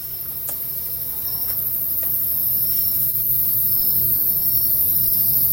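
The audio runs clean until about 3.09 s, then from there to 5.10 s there's repeated packet loss (robotic sound): a rapid string of short dropouts, none longer than about 20 ms, each patched by stretching the last bit of sound. It comes out choppy, with chunks missing.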